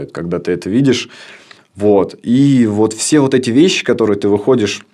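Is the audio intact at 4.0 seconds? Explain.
Yes, at 4.0 seconds the speech plays through intact, with no dropout, click, distortion or other fault at that moment.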